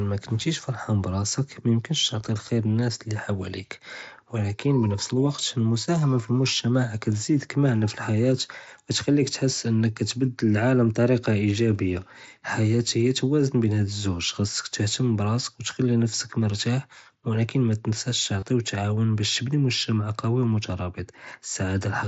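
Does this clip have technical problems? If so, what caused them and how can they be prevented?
Yes, there's one brief concealed Bluetooth headset packet loss from 18.40 to 18.43 s, just before "ותעון באש". About 22 ms of audio went missing (consistent with three lost mSBC frames), and the receiver patched it by repeating a matching recent stretch, which leaves a brief buzzy blip. Keeping the phone close to the headset and away from Wi-Fi congestion helps prevent it.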